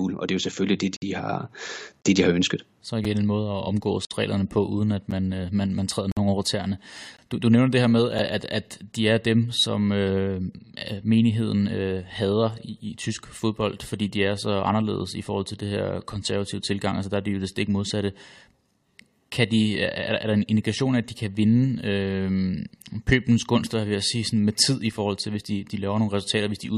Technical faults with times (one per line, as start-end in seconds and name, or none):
0.96-1.02 gap between stream segments
2.02-2.05 gap between stream segments
3.05 gap between stream segments
4.05-4.11 gap between stream segments
5.11 gap between stream segments
6.12-6.17 gap between stream segments
7.17 gap between stream segments
8.18 gap between stream segments